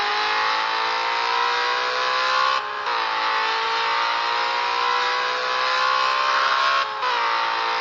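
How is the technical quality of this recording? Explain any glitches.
The recording has one clear fault, a call bitrate drop from 2.46 s to 7.37 s. The encoder gets far fewer bits, which fits a fall from about 64 to 26 kbps. It codes coarsely, so the sound turns rough and watery for about 3 s at its worst. A spectrogram would show visibly blurrier, blockier detail.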